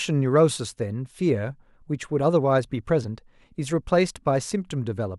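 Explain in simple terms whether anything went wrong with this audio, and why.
Nothing went wrong here, as far as anyone listening could tell: the speech comes across without any dropouts, glitches or other technical hiccups at any point.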